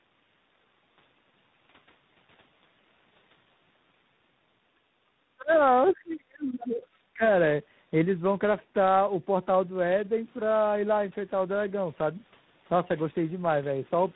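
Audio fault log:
throughout: tandem speech coding. The speech passed through a chain of speech coders, a low-rate mobile codec, then a 64 kbit/s telephone link, then a 24 kbit/s ADPCM stage. Each stage decoded and re-encoded the output of the one before, so the errors pile up. Nothing comes through above 3.9 kHz, and the voice sounds rough, muffled and warbly. It is worse than any single narrowband coder would make it, and unlike a plain band limit the damage goes beyond the missing top end and into the texture of the voice itself.
5.86 s: other side's voice leaking through. A brief scrap of a second voice, about 70 ms long, surfaces at roughly 25 dB below the talker. It is likely the far end playing on the device's loudspeaker and getting past the echo canceller into the microphone. What separates it from crosstalk or background chatter is its timing: it lands right where the talker's level is about to collapse, and it is a brief scrap rather than a steady second voice.
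5.91 to 6.88 s: speech suppressed in double talk. For about one second the talker's level sinks, at its deepest by roughly 30 dB. Both sides were likely speaking at once, and the echo canceller, unable to tell its own talker from the loudspeaker echo, turned everything down. Unlike a dropout or a network gap, the audio is ducked rather than replaced by silence or glitches, and it recovers once the overlap ends. The call's microphone processing plays no part in it.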